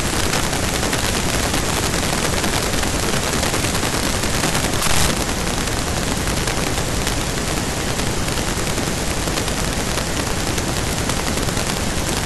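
Integer overflow runs throughout the speech. With the signal driven about 30 dB too hot, a small fraction of samples exceed the integer limit and wrap to the opposite extreme instead of flattening. Each loud peak therefore snaps into violent cracks, far harsher and spikier than clipping's steady buzz.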